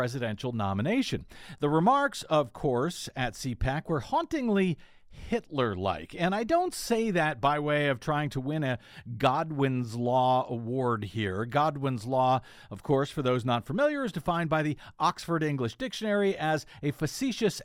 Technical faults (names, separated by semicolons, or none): none